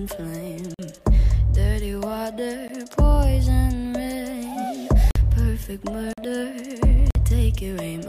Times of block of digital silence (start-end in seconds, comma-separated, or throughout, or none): 0.74-0.79, 2.68, 5.11-5.15, 6.13-6.18, 7.11-7.15